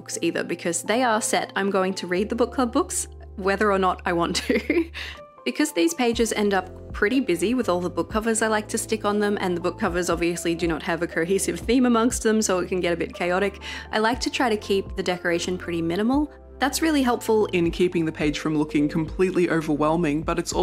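From 17.54 s to the end, a section at the wrong speed plays at 0.875x, about two semitones lower, likely from a mismatched clock; spectrogram harmonics drop and events stretch.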